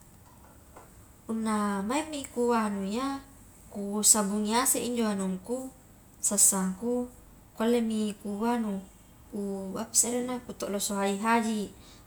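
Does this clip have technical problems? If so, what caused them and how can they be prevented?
No, there are no technical problems in this recording.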